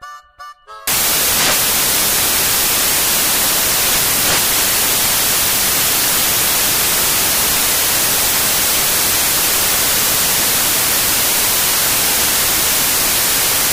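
From 0.87 s to the end, samples built from the wrong bytes turn the sound into loud, harsh broadband noise: misassembled bytes promote low bits, filling the spectrogram edge to edge.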